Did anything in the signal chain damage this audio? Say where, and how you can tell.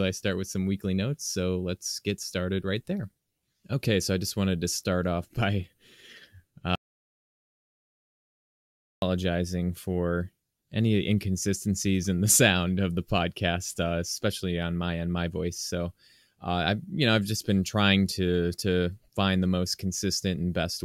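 Yes. An audio dropout to silence runs from 6.75 to 9.02 s. The speech cuts to silence without room tone. The likely cause is a lost input link at capture.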